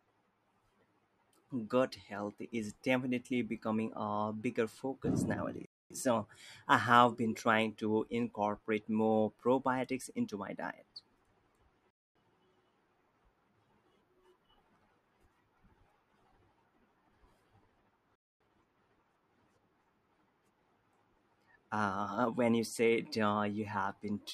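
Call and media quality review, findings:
Gap between chunks in the speech, three times: 5.65 to 5.90 s, 11.90 to 12.15 s, 18.15 to 18.40 s. Each is a 250 ms hole, recurring after every 6 s of audio. Nothing seems missing; the sound just stops and resumes. Probable component is the chunked transport or the player, with padding or a late start leaving silence at each join. Check the chunk boundary handling.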